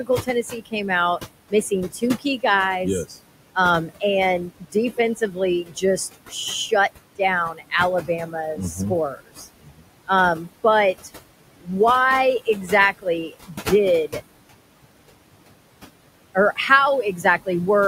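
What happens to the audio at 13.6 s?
At 13.6 s the sound falls inside a stretch of speech cut by the noise suppressor, running from 12.4 to 14.23 s. The suppressor mistakes quieter parts of the speech for noise and turns them down with the background, by up to about 19 dB, across roughly half a second in total. Soft consonants and word endings sound swallowed or faint. On a waveform the envelope dips abruptly within the phrase. A spectrogram shows the weaker speech energy, especially high-frequency consonant detail, fading to near-empty cells.

The same moment also carries the noise suppressor artifacts heard throughout. The room noise, which sits about 13 dB below the speech, is pulled down frame by frame by about 21 dB between words and lets through more under them, so it pumps with the speech. A spectrogram shows the background as a patchy, speckled floor with isolated islands of residue, gaps between words, and a fuller floor under words.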